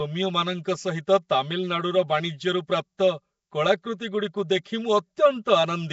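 Channel delay (comb filtering) runs through the whole speech clip. One channel arrives roughly 5 ms late, and summing to mono cancels shared content at evenly spaced frequencies starting near 100 Hz. The result sounds hollow and phasey, and a spectrogram shows fixed, regularly spaced dark horizontal notch bands.

Also throughout, the speech carries a rough, hissy halo and a smeared, underwater quality, with plainly audible coding damage. This likely comes from Nellymoser compression at a rate fitting 32 kbps. On a spectrogram, nothing appears above 7.7 kHz, and weak bands look blocky and noise-filled.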